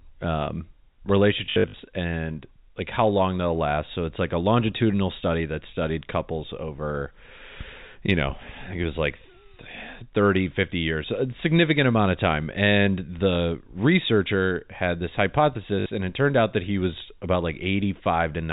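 A robotic stutter breaks the speech from 1.46 to 1.74 s, with a 50 Hz buzz that fits 20 ms packets, and again from 15.8 to 15.86 s. This is packet loss with the last packet repeated: about 200 ms went missing in scattered gaps of up to 60 ms, then 60 ms, refilled by replaying audio.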